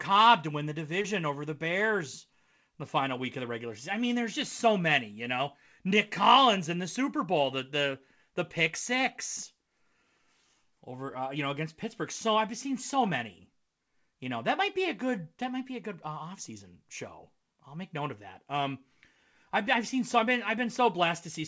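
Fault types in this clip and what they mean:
Short concealed packet loss: at about 1.02 s, some 20 ms of the speech failed to arrive in time, and the decoder covered the gap by extending the preceding sound before easing back into the real signal. The result is a brief smear or wobble. The call codec above it, consistent with G.722, leaves nothing above 8 kHz.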